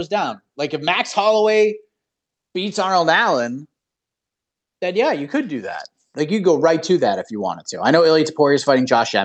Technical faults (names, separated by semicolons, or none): none